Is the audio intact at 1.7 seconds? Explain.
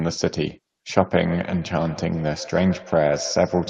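No. From 1.16 s to the end, a feedback echo between two devices re-captures one device's playback, so speech returns roughly every 150 ms, thinner and ringing, peaking about 15 dB below the speech.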